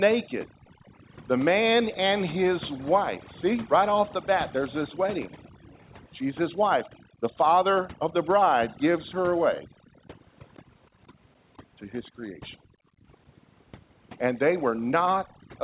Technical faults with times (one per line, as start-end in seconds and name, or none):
0.00-15.64 overdone noise removal
0.50-0.94 background gated by the echo canceller
5.43-5.91 echo leak
5.51-5.68 background gated by the echo canceller
7.02-7.21 background gated by the echo canceller
9.64-10.08 background gated by the echo canceller
12.04-12.08 echo leak
12.66-13.08 background gated by the echo canceller
15.27-15.49 background gated by the echo canceller